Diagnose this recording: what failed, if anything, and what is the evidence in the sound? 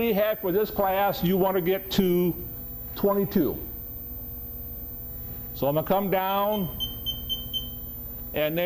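The fault is a switching supply whistle in the analogue stage, where power feeds the audio path. A thin, high tone sits under the sound for the whole clip. It wanders between about 14.2 and 14.4 kHz rather than holding one pitch. It is strong, roughly 10 dB below the programme. A switching regulator nearby is running at an audible rate, or beating against another supply. Its ripple couples into the wiring or ground and gets recorded.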